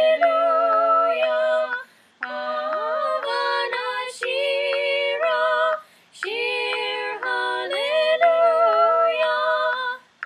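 No technical faults are audible.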